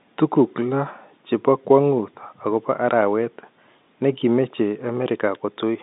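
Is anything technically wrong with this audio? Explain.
No, nothing's wrong here; it's simply speech carried over ordinary G.711 telephone coding, so the narrow line band of roughly 150 Hz to 3.7 kHz you hear is just how a regular phone call sounds.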